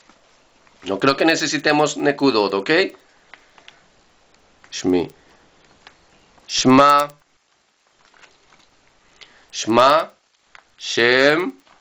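From the start of the clip to the end, a regular tick runs under the sound at 10 per second, present only while there is signal. This is a resampler restarted on every block: each 100 ms block was converted on its own, likely in an upsampling step that points to 16 kHz going to 48 kHz, so the filter at every block edge lacked its real neighbouring samples and left a small discontinuity that repeats at the block rate.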